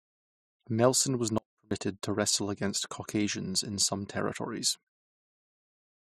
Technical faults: audio dropout to a faint residue

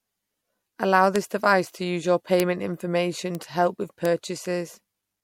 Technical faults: bit error spike

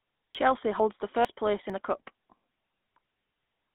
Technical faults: GSM full-rate codec; audio missing between chunks

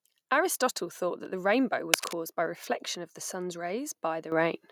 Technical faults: cable scratch noise; microphone volume stepped up

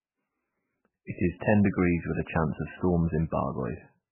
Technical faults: MP3 compression

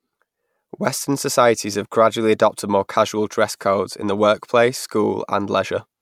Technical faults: none

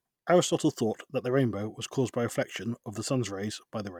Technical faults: none

